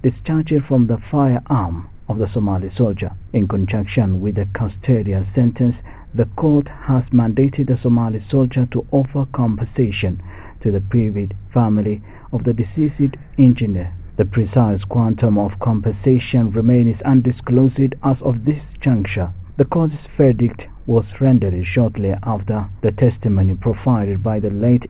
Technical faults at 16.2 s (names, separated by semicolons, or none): none